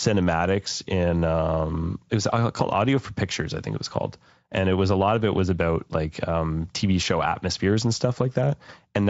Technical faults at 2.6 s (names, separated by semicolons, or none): VoIP packet loss concealed by the speech codec